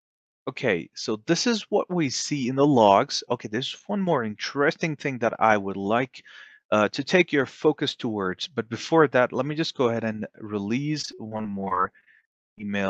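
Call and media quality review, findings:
Repeated packet loss (robotic sound), 11.01 to 12.64 s: choppy stretch with close to twenty short dropouts, longest around 38 ms. Jitter buffer/concealment keeps stretching the last bit of sound over each hole, and about a quarter of the span ends up patched. Call path itself sounds like Opus at 40 kbps, top end stopping near 8 kHz.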